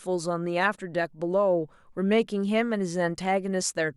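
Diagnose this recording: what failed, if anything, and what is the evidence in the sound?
Nothing in this speech recording points to a failure at any stage of the chain. There is no audible evidence of a fault to diagnose.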